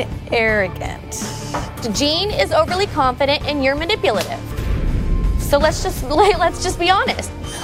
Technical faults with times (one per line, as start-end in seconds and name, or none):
6.15 block of digital silence